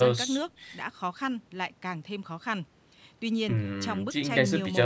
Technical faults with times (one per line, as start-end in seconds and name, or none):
none